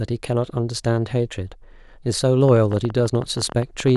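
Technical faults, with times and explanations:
2.49 to 3.96 s, train of clicks: about twenty near-identical pulses at an uneven 13.6 per second, ticking over the speech and pauses and peaking about 5 dB above it, likely from interference or a faulty connection or power supply. Their matching shape separates them from random vinyl-style crackle.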